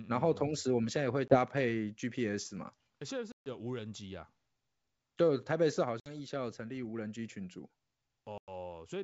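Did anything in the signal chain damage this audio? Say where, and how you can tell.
Yes, at the network stage: packet loss on an ADPCM call, here a G.722 wideband link at 64 kbit/s. Hard-edged silent gaps appear at 1.28 s (20 ms), 3.32 s (140 ms), 6.00 s (60 ms) and 8.38 s (100 ms), each spanning roughly one to seven packets. Because the lost audio is replaced by silence, the decoder's adaptive predictor and step size drift from the sender's, so the speech returns with some distortion before settling.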